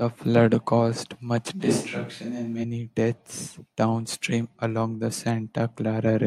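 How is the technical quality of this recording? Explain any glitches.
The speech has one glitch. A switch to a distant microphone occurs from 1.62 to 2.62 s, likely because the close microphone dropped out. The speech turns suddenly roomy, hollow and thin at the same level, with background noise roughly 35 dB below it, then snaps back.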